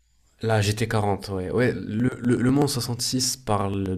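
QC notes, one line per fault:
2.00 to 3.86 s, periodic USB or driver dropouts: about a millisecond of speech skipped every 0.124 s, so regular little ticks land right on the signal.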